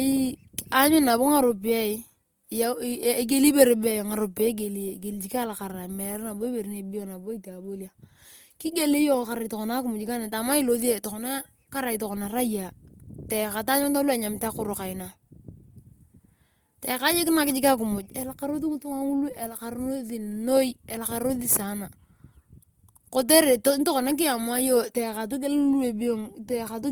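It's a speech clip, and the whole thing carries plainly audible coding damage, most likely Opus compression in its music (CELT) mode at a low rate, around 24 kbps. The band is still full width, reaching up to about 20.1 kHz, but the encoder is short of bits, so upper bands get patched with folded copies or noise. That comes through as a grainy, rough, noisy texture over the sound from start to finish.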